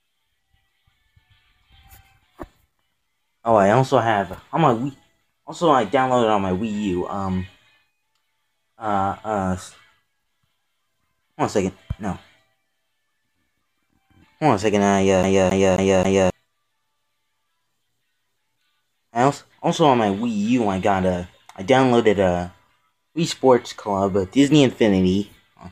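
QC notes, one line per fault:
15.23–16.30 s, CD stuck on one turn: the laser skipped back a track every rotation, so one 0.27 s snippet plays four times in an even, stuttering loop.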